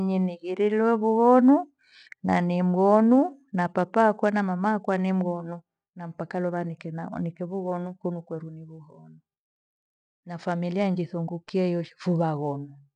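Speech with no audible faults.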